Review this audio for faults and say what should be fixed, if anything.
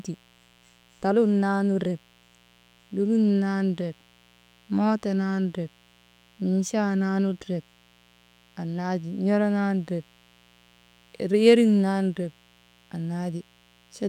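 There's a mains buzz running under the whole speech track, sitting roughly 35 dB below it. It's built on 60 Hz, and because something like a dimmer or rectifier is firing sharp spikes twice per cycle, the harmonics stack up well into the kilohertz range, which gives it that raspy edge rather than a clean hum. Next time, keep the mic and cables well away from dimmers and power supplies and check the cable shielding.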